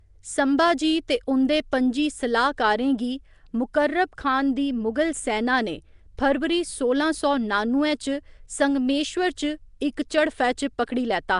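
The whole clip has that rough, hissy halo and underwater smear, most likely Nellymoser compression. Its fixed two bits per sample leave weak bands filled with noise, nothing survives above about 10.6 kHz, and the damage is plainly audible, consistent with a rate around 44 kbps.

At 1.72 s and again at 6.18 s there's pre-echo. A sharp attack landed late in a coding block, so noise meant for the loud part spills about 10 ms ahead as a short hiss, and the onset sounds softened.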